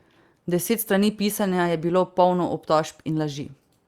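A short speech recording carries clock drift between sender and receiver: the sending device's clock runs roughly four percent fast, so audio arrives quicker than it is played out and the receiver's jitter buffer keeps filling, forcing it to discard material throughout. The result is repeated timing corrections from 0.33 s to 3.70 s, where short pieces are cut at uneven intervals to keep pace with the sender, speeding playback to 104 percent, heard, if at all, as faint hiccups and a slightly unsteady, hurried tempo.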